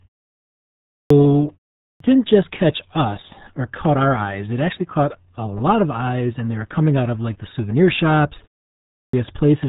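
Throughout, the speech has passed through the RealAudio 14.4 codec at 8 kbit/s. Nothing above 3.8 kHz survives, so the sound is muffled and gargly with heavy coding damage. A spectrogram shows a hard ceiling near 3.8 kHz with empty space above it.

At 0.91 s, 1.83 s (just before "didn't just catch us") and 8.93 s (right after "like the souvenir shops"), there is a clipped start after a pause. The output device dozes during the preceding silence and wakes late, swallowing about 190, 170 and 200 ms. Each onset bursts abruptly from silence, and the waveform jumps straight into the speech with no rising attack.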